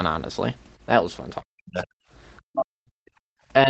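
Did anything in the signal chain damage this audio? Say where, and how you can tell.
Yes, the damage happens in the call processing stage, specifically in the echo canceller that sits after the microphone. Above 8 kHz the audio is empty, which fits the Opus call path at around 20 kbps, and that band limit is not itself a fault.

Speech suppressed in double talk appears from 1.52 to 1.97 s and again from 2.51 to 3.0 s. In each window the speech sinks by roughly 40 dB at its deepest, for about half a second. This is likely the canceller hearing both sides active at once, failing to separate the near talker from the loudspeaker echo, and turning the whole microphone signal down.

The other side's voice leaking through shows up briefly from 2.37 to 2.42 s as a faint foreign voice, around 40 dB below the main speech. This is likely loudspeaker echo that the canceller did not fully subtract from the microphone path, leaving a short residual scrap in the gap between the two suppressed stretches.

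Background gated by the echo canceller occurs from 3.28 to 3.37 s, where the room tone drops by about 35 dB for roughly 100 ms before coming back. While far-end audio was playing, the canceller clamped the microphone hard enough to cut the ambient floor, then released it. That clamp produces the brief hole in the background.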